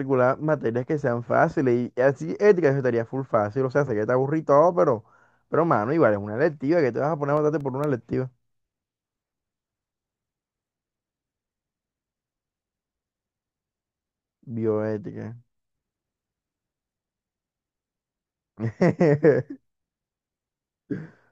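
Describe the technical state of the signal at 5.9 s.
At 5.9 s the speech signal is intact, with no dropout, clipping, distortion or other audible fault at that moment.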